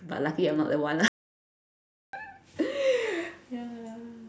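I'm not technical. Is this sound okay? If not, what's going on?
No, there's an audio dropout to silence from 1.08 to 2.13 s: the speech cuts to dead silence for about a second, likely from the input briefly disconnecting.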